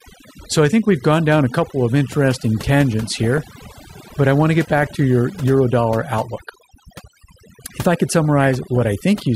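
Throughout the speech, overdone noise removal leaves the background lowered and broken up into twinkling specks. The reduction pulls individual frequency bands down hard wherever they sit close to the estimated noise floor, so quiet parts of the voice vanish too. Unlike codec swirl, the artefacts follow the noise estimate rather than frame timing, and they persist steadily instead of arriving in bursts.

DAB burbling breaks in three times. From 3.14 to 3.48 s, after "couple of interesting tangents", residual bit errors at a rate of around half a percent slip past error correction into the MP2 data. Corrupted samples put short blips of noise into single sub-bands, and corrupted scale factors, where they get through, make sub-bands leap in level for up to a frame. A shorter burst follows at 4.78 to 4.87 s, between "I want to get" and "to your euro dollar", and a longer one at 8.44 to 8.81 s after "if I could". 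These bursts are brief disturbances that arrive and clear abruptly, which sets them apart from the constant twinkle of the noise removal.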